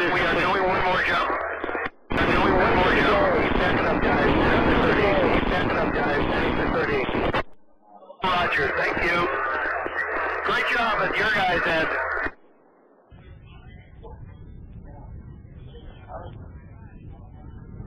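From 2.18 s to 7.54 s a second, full-band copy of the sound runs about two seconds behind the original at roughly the same level, with no decay or room colour, starting and stopping abruptly. This doubled audio track is likely a second capture path or misaligned edit.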